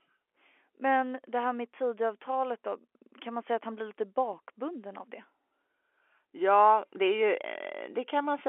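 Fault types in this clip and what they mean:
Nothing stood out on listening to the speech, which keeps the narrow, boxy sound of an ordinary telephone line.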